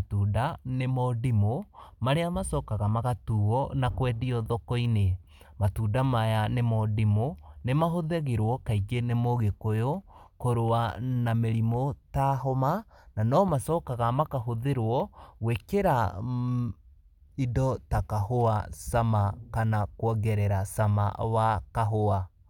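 No technical faults can be heard anywhere in the recording; the signal stays steady and intact across its whole length.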